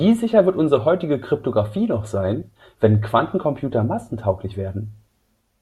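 Speech, with one glitch to flag: at about 2.42 s there's a case of compressed frames skipped, where a single frame of the encoded stream, which fits a 32 ms frame length, never made it to playback, either lost from the file or rejected by the decoder as damaged. The audio jumps ahead by roughly 30 ms there.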